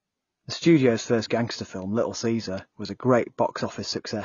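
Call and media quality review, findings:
Throughout the speech, band-limited: nothing above 6.9 kHz, dull top end, first-pass coding artefacts audible. Probable component: upstream encoder chain. Low-bitrate audio saved at a high bitrate, likely a lossy source near 24 kbit/s re-encoded to MP3 at about 192 kbit/s. The larger file cannot restore what the first pass discarded; its cut-off and artefacts carry through, and the second encode adds almost nothing.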